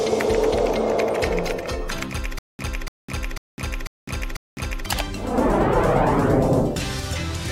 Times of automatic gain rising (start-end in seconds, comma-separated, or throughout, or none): none